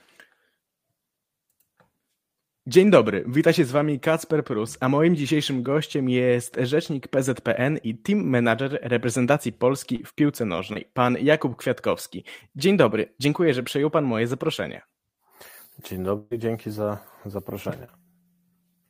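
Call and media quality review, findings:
Short concealed packet loss, 9.95 to 10.01 s: brief smear where 40 ms of audio never arrived. Jitter buffer or decoder concealment extended the preceding sound, then crossfaded back.

Short concealed packet loss, 10.73 to 10.77 s: quick wobble, about 20 ms missing and filled from the last received audio.

Short concealed packet loss, 17.85 to 17.90 s: smear over a 40 ms gap, 31 ms of it synthesised before rejoining real signal.

Burst of packet loss, 16.17 to 16.33 s: consecutive packets late or lost, 140 ms of audio gone. Receiver concealment held and faded the last sound over 134 ms, with no dropout to silence. Playback resumes further on, with the intervening segment absent. Network-side loss, not capture.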